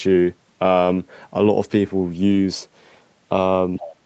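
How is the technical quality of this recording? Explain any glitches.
The speech comes through a wideband call path with nothing above 8 kHz, and three short glitches are audible near 2.3 s and at the end.

Lost packet rebuilt from error correction, 2.31 to 2.37 s: about 40 ms, consistent with two lost packets, was replaced by low-bitrate backup copies, so the audio turns briefly rougher and noisier without a gap.

Speech suppressed in double talk, 3.79 to 3.86 s: the speech drops by up to about 15 dB for roughly 70 ms, likely because the echo canceller attenuated the talker while both sides spoke.

Other side's voice leaking through, 3.82 to 3.96 s: a faint second voice, about 15 dB below the speech, is audible, likely loudspeaker echo the canceller failed to remove.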